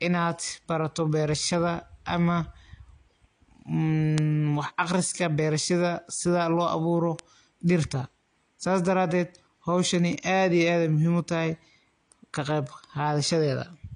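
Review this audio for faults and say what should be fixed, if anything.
Throughout the recording the speech sounds dull and smeared, with nothing at all above 9.8 kHz and the swirly, watery texture of heavy compression. The file is a high-rate MP3, yet it carries these traits, so the cause is likely low-bitrate audio saved at a high bitrate. An earlier encode, which fits AAC at around 32 kbit/s, stripped the top band and left its artefacts, and the generous MP3 re-encode only preserved that damage. To prevent it, always encode from the original uncompressed source rather than from a low-bitrate copy.

Four isolated, sharp ticks cut through the speech at 4.18 s, 7.19 s, 10.13 s and 12.67 s. Each is broadband and has nothing to do with the surrounding sound. These are bit error spikes: a single flipped bit makes a sample value jump by a power of two and snap straight back, a one-sample event in most cases, while the 4.18 s tick looks like a short run of about three corrupted samples. 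To prevent them, move and store the audio over error-checked links and memory, and verify files with checksums after transfer.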